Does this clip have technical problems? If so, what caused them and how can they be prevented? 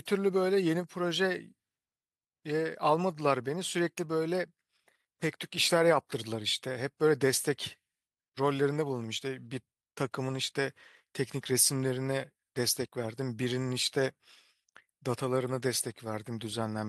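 No, nothing in this speech recording points to a technical fault. There is nothing here to trace back to a cause or guard against.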